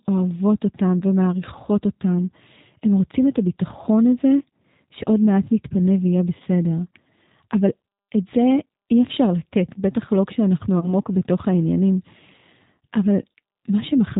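Throughout, the speech carries plainly audible G.729 codec damage, which fits the 8 kbit/s G.729A variant. Everything above 4 kHz is missing, and voices sound rough and slightly synthetic because they are rebuilt from a vocal tract filter, pitch predictor and sparse pulses.

At 0.99–1.04 s, 6.38–6.42 s and 10.80–10.93 s, VoIP packet loss concealed by the speech codec briefly stretches the sound into a buzzy tone or coloured noise that fades. Each gap is about 20 ms, consistent with one lost packet, and the last one stays distorted longer as the decoder recovers.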